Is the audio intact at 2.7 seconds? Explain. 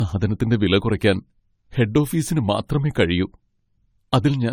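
No. At 2.7 seconds, as throughout the clip, the speech shows generation loss, likely from being encoded about four times over with AAC-LC at 64 kbit/s. Each pass requantises on a shifted frame grid, so the sound turns swirly, smeared and hollow, with blurred attacks and nothing above 18.4 kHz.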